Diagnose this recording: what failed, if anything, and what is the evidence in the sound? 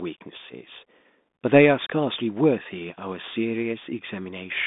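Codec stage: a Bluetooth CVSD headset codec throughout. Nothing passes above 3.8 kHz, sibilants scratch, and granular hiss sits underneath, fitting a 64 kbps one-bit delta stream.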